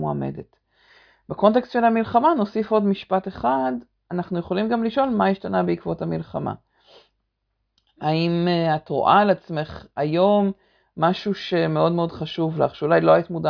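No technical faults can be heard anywhere in this speech recording. There is no moment that stands out as a problem or needs a timestamp.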